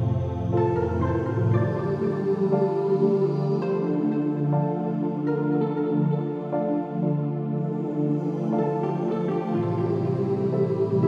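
Nothing goes wrong anywhere in this one, so there's no fault to point to at any moment in the audio.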